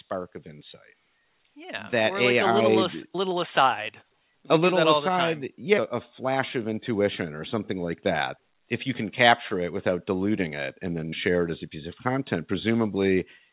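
It's a speech recording, and the main thing you'll notice is automatic gain rising right at the start: from about 0.1 s to 3.44 s the level creeps up by about 8 dB, voice and background swelling together rather than the speaker getting louder. That's the gain control deciding the input was too quiet and winding itself up over a few seconds. The call path's narrow band, with nothing above 4 kHz, fits a G.711 A-law codec at 64 kbps.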